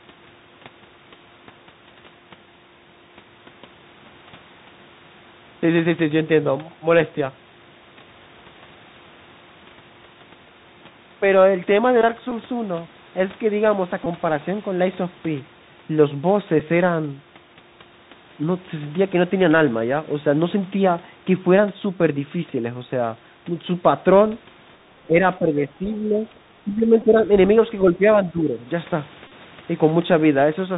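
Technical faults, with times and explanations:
Throughout, Bluetooth CVSD headset codec: nothing above 4 kHz survives, a granular hiss sits under the speech, and sibilants turn scratchy. This fits 64 kbps one-bit delta modulation, whose adaptive step cannot keep up with loud high-frequency energy and so distorts it.
At 12.31, 14.04–14.07, 16.60, 24.35, 27.02 and 29.27–29.32, Bluetooth headset packet repeated: 7.5, 15, 7.5, 3.8, 15 and 33.8 ms were replaced by re-decoded copies of the previous packet. The single-packet one at 24.35 is a small tick. The last one, scattered over 37.5 ms, forms a brief 267 Hz buzz from the 3.75 ms repetition.
At 25.07–25.21, 25.39–26.23, 26.61–27.21, 27.82–28.04 and 28.24–28.60, speech suppressed in double talk: the speech level dips by about 5 to 15 dB in pieces, with the deepest cut around 26.6–27.2. The likely cause is an echo canceller attenuating the near talker while the far side was also speaking.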